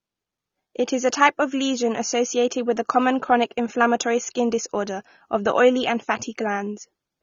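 AAC compression runs throughout this speech clip, with nothing above 6.9 kHz, a dull, smeared top end and a fizzy warble on sibilants. The likely cause is AAC-LC coding at a bitrate that fits roughly 24 kbps, which lowers the cut-off and thins the quantised spectrum into holes.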